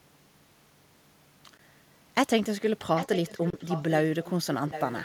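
Speech with two kinds of fault. Brief holes at 1.57 s and from 3.50 to 3.53 s cut the sound out. These are likely a Bluetooth dropout, fitting one lost packet and then two. From 2.95 to 3.91 s, 4.23 to 4.31 s and 4.69 to 5.02 s, a copy of the speech returns 793 ms late. It sits roughly 10 dB below the speech, and nearer 20 dB below in the short middle stretch. This is likely an echo leak, where a far-end loudspeaker got past the echo canceller.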